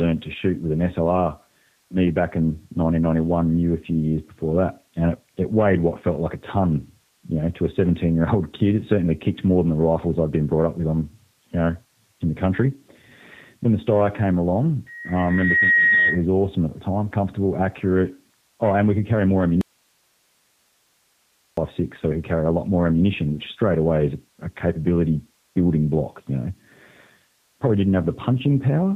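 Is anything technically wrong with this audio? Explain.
Yes, two faults can be heard in this speech clip.

The G.729 codec effect runs through the whole recording. Nothing above 4 kHz survives, and the speech has a rough, slightly synthetic grain, which points to an 8 kbit/s G.729-family coder. It rebuilds each 10 ms frame from a vocal tract filter, a pitch predictor and a few pulses. That model-based roughness sets it apart from a simple low-pass filter, which would dull the sound without adding the buzzy, reconstructed texture.

An audio dropout to a faint residue runs from 19.61 s to 21.57 s, close to 2 s. The speech cuts off abruptly and returns just as suddenly. Only hiss remains in the gap, roughly 45 dB below the speech. The likely cause is the wanted signal being lost upstream while the path after the break stayed live. The hiss is what tells it apart from a mute or digital silence, and the hard edges rule out a natural pause or a fade.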